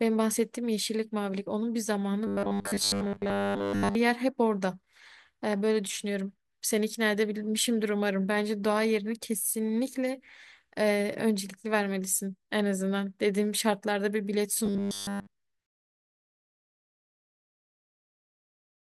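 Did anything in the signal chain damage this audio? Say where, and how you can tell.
Yes. Robotic sound from repeated short buffers at 2.27–3.95 s and 14.66–15.28 s turns the speech into a rigid, metallic 100 Hz buzz, through most of the first stretch and all of the second. The likely cause is a buffer underrun that loops a 10 ms block while the real audio is skipped.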